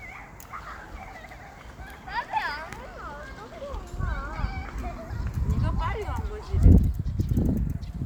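No technical faults occur at any point in the audio, so there is nothing to place in time order.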